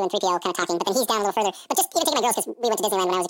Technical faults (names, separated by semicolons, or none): audio read two samples at a time (double speed)